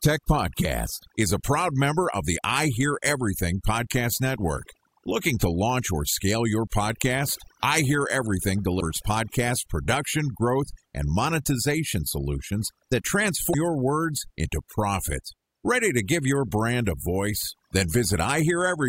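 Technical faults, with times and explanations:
Throughout: overdone noise removal. The noise reduction was set too aggressively, so frequency bands near the estimated noise floor are pulled down or switched off. The background drops and breaks up into twinkling specks, and the speech's quieter components are removed with the noise.
8.77–8.82 s and 13.49–13.55 s: damaged data in a compressed stream. Corrupted frames make the decoder misread the stream and lose sync until it finds the next valid frame header. Each event is a brief glitch of about 50 ms, the first just before "podcast production growth and", the second between "and monetization solutions that" and "your words into profit".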